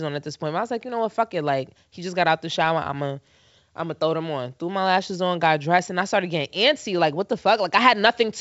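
No technical faults can be heard in this speech, which carries the wideband telephone band of G.722 coding, clear up to about 7 kHz, a sound that fits the codec's full 64 kbit/s mode.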